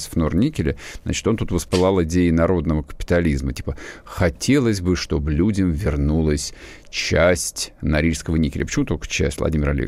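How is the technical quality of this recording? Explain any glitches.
The recording has no technical glitches to explain. Nothing in the speech points to a fault in how it was captured, processed or delivered.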